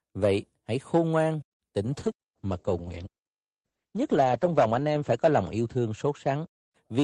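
At 1.87 s the call's bandwidth estimate falls and the encoder cuts its bitrate sharply; the sound points to a fall from around 64 to 9 kbps. This call bitrate drop lasts to the end of the clip, with the lowest rate held for about 2.73 s. Coarser coding makes the speech rough and watery, and the audio bandwidth narrows from 20 kHz to 8 kHz, so the voice turns muffled and loses its crisp consonant detail.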